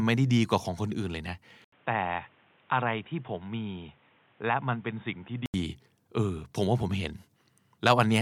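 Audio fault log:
1.64–5.54 s, input switched to a poorer device: the speech turns dull and boxy, with nothing above 3.8 kHz, drops around 5 dB in level, and gains a new noise floor roughly 35 dB under the signal before clearing again at 5.54 s. The likely cause is a change to a narrower-band microphone or headset profile. A spectrogram shows the top band abruptly cut flat, and the waveform shows an 80 ms gap at the switch and shrunken peaks.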